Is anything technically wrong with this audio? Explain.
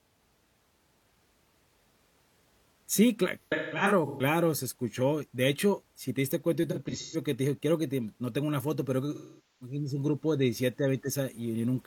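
Yes. The speech turns smeared and phasey at 3.43 to 4.22 s (before "se escuchó"), 6.71 to 7.17 s (between "si te diste cuenta" and "que te dije"), and 9.14 to 9.76 s (between "tengo una foto pero" and "un grupo de"). This is AAC frame loss with concealment. Runs of lost frames, scattered and each up to about 150 ms in the first two, were patched by the decoder from the last good spectrum.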